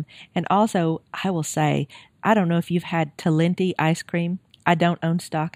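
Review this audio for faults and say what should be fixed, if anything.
At 0.47 s a block of digital silence about 1.5 ms long cuts into the speech and is heard as a single tick. Its length fits a 64-sample buffer that was left unfilled. The waveform shows a brief near-flat line with sharp edges, and the spectrogram shows a thin broadband vertical streak. To prevent it, give the audio thread enough headroom, through a larger buffer or higher scheduling priority, that every block is filled before its deadline.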